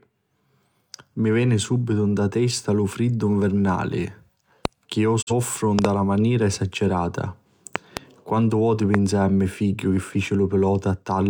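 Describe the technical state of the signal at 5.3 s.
A digital broadcast dropout runs from 5.21 to 5.32 s, just after "che iu". The receiver stopped getting usable data, either because the signal was lost or because a frame failed its checksum, so it muted until good frames resumed. The audio fades to silence over about 20 ms and then comes back. The missing stretch is about 43 ms of programme, which fits a single lost frame, and whatever was broadcast in that gap is gone.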